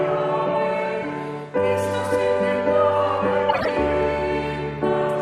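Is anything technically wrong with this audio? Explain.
Yes. From 3.49 to 3.69 s there is a corrupt frame decoded fault: bits inside a run of roughly seven compressed frames were damaged, and the decoder played them anyway instead of concealing them. The misread gains and codes put energy at frequencies that have nothing to do with the surrounding audio, so for about 0.2 s there is a chirping, squeaky burst of noise that peaks loudly, around -10 dBFS.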